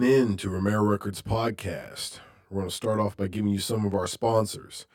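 Throughout the speech sounds rough and slightly doubled. This is channel delay (comb filtering). One channel arrives roughly 20 ms late, and summing to mono cancels evenly spaced frequencies, starting near 30 Hz.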